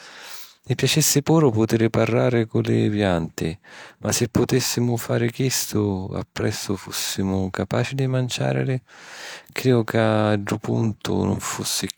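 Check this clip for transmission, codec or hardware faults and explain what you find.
No faults can be heard anywhere in this speech recording. There is nothing in it that needs a closer look.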